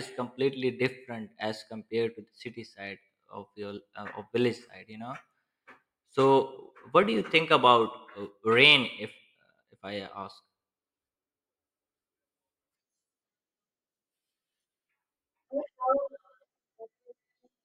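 No technical fault can be heard anywhere in the speech recording, with the signal remaining continuous and intact throughout.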